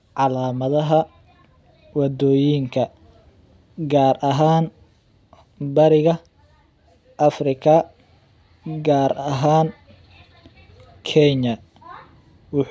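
No dropouts, glitches, distortion or level jumps turn up anywhere in the recording; the signal path shows no faults.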